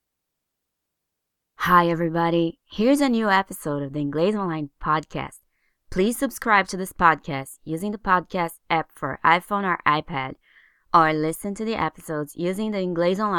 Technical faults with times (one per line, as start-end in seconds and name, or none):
none